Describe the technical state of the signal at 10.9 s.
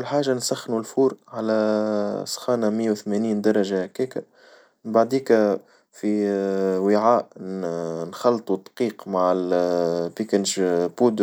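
At 10.9 s the speech signal is intact, with no dropout, clipping, glitch or other audible fault at that moment.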